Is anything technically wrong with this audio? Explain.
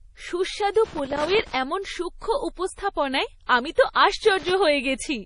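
Yes, there are two problems. Low-bitrate audio saved at a high bitrate affects the whole speech clip. Nothing is present above 10.6 kHz, and the swirly, smeared detail of a heavily compressed MP3 is audible. This fits a 32 kbit/s MP3 that was likely re-encoded later at around 256 kbit/s. The larger second file cannot restore what the first encoder discarded, so the band-limit and artefacts remain.

Loose connector crackle occurs from 0.85 to 1.55 s and again from 4.24 to 4.51 s. A worn or dirty contact rapidly breaks and remakes the connection, chopping the signal on and off, and any DC on the line turns each break into a pop. The result is an irregular burst of scratchy crackle layered over the speech.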